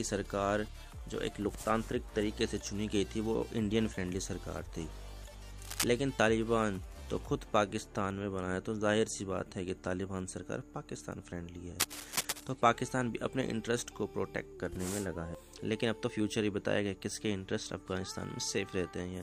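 At 5.65 s a burst of scratching cuts across the sound for about 0.19 s. It returns from 11.80 to 12.44 s, lasting longer. Both are cable scratch noise, roughly as loud as the sound itself, likely from a worn connector whose contact shifted.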